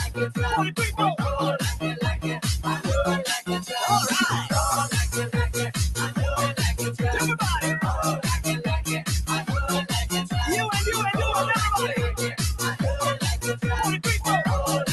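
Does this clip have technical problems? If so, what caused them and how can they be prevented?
Yes. Between 3.4 and 3.72 s the noise suppressor mistook part of the sound for noise and turned it down, by about 13 dB at its deepest, for around a fifth of a second in total. Unlike a dropout, the sound dips and returns without going silent or clicking. To prevent it, lower the suppressor's strength or give it a cleaner signal so less of the wanted sound gets classed as noise.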